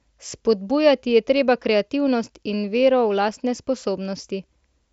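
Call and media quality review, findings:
No audible faults found.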